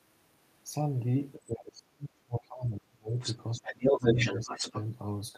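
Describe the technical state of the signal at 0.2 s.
The speech signal at 0.2 s is intact, with no audible fault at that moment.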